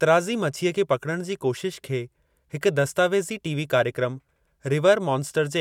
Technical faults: none

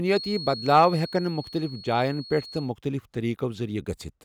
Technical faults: feedback whistle

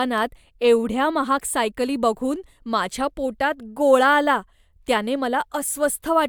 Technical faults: none

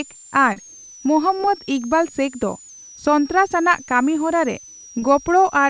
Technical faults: switching supply whistle; short concealed packet loss

